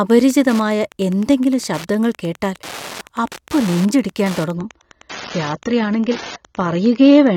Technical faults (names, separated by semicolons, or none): Wi-Fi interference; adaptive stream at a lower bitrate